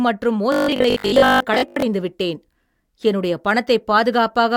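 From 0.52 to 1.84 s the speech takes on robotic sound from repeated short buffers. It becomes a rigid, metallic buzz at 50 Hz. Most of that stretch is repeated material. The likely cause is a 20 ms buffer looping while new audio arrives late.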